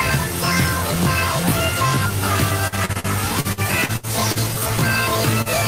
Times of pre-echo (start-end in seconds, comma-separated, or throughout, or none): none